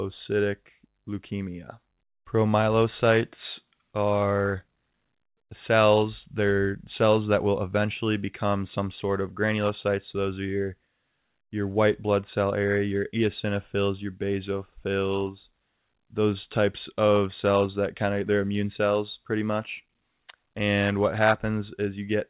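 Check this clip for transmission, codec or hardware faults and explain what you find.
Nothing here sounds wrong, just speech as it comes across a narrowband call path with nothing above about 4 kHz, which fits ordinary G.711 A-law telephony.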